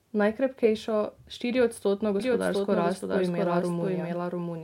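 A speech recording in which a second capture path, likely slower than the first, gets mixed back in from 2.20 s, so the audio is doubled for the rest of the clip. The copy trails the original by roughly 0.7 s and sits about 5 dB quieter, full-band and dry, with no reverberant tail. It cuts in abruptly rather than fading up, and the speech is then heard twice, smearing into an overlapping echo.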